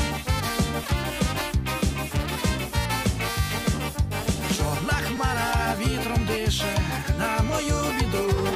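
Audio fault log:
5.17 s, repeated buffer: a very short slice of sound, about 5 ms long, plays four times in a row because fresh audio did not reach the device in time, so it replayed its last buffer. At that size the repeats fuse into a brief buzz or click rather than a stutter, with essentially nothing lost. The waveform shows a 5 ms block copied end to end with hard joins. The spectrogram shows a thin vertical stripe with harmonics spaced near 200 Hz.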